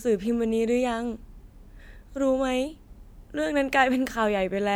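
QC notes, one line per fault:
No audible faults found in the speech.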